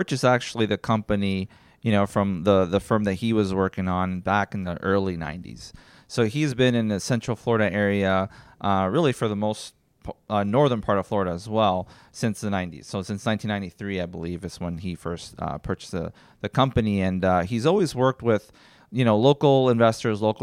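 No technical faults can be heard anywhere in the speech. Nothing breaks, stalls or goes wrong at any point in the recording.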